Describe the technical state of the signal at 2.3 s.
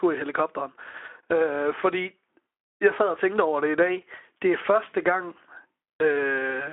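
At 2.3 s the audio is intact, with only the light coloration of the narrowband Speex coding it passes through and nothing above about 3.8 kHz.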